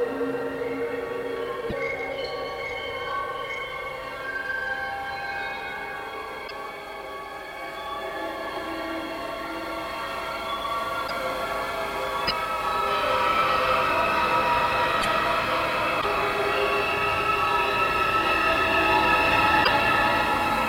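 At 1.69, 6.47, 11.06, 12.27, 15.01, 16.00 and 19.63 s the sound skips forward, then garbles for about 40 ms. This is likely a broken MP3 bit reservoir: after dropped frames, the next frames fetch borrowed data from the wrong bytes. The length fits roughly two 26.1 ms frames.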